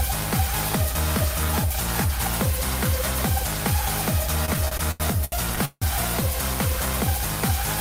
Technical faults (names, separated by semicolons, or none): repeated stalls (stutter)